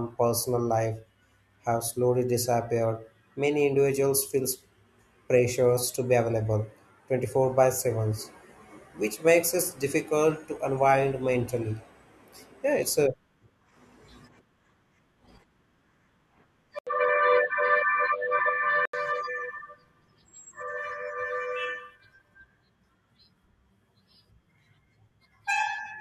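Input switched to a poorer device, 16.79 to 18.93 s, likely a microphone change: after an 80 ms gap, speech turns boxy, losing everything above 4.6 kHz.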